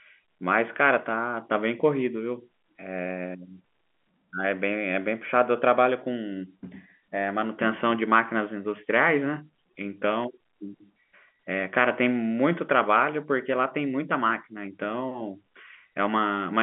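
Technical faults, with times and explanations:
No technical faults can be heard in the speech. It comes over G.711 telephone coding, which holds the sound to the line band of 200 Hz to 3.4 kHz and leaves at most a faint trace of the coding itself.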